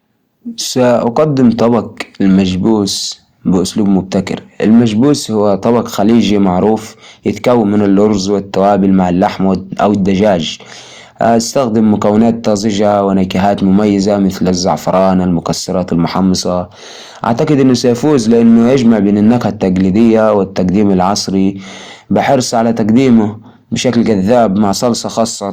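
Hard clipping runs through the whole speech clip. The signal was driven about 4 dB beyond what a stage in the chain could pass, so the loudest peaks, around one to two percent of the audio, were cut flat, adding high harmonics heard as crackle on peaks.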